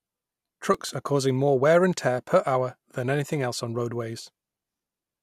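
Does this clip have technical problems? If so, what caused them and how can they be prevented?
Yes. CD scratch ticks run from 0.30 to 0.89 s, just before "are causing more wear": five short ticks, the longest a couple of milliseconds. A scratch destroys more data than error correction can rebuild on each disc turn, so the player patches or mutes those samples. Preventing this means cleaning or resurfacing the disc, or ripping with a secure, re-reading ripper.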